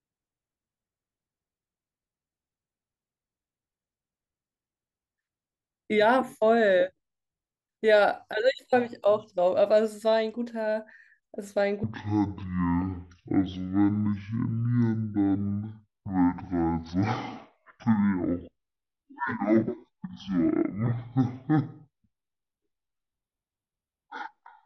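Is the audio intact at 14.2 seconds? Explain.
No. At 14.2 seconds the speech is dragging at half speed and sits a full octave low, with a faint mirrored copy of the sound in the upper half of the spectrum. This is stereo read as mono, running from 11.84 s to the end at 24.66 s: the interleaved left and right samples are played in sequence as one channel, so each stereo frame becomes two mono samples, doubling the duration and dropping the pitch by 12 semitones.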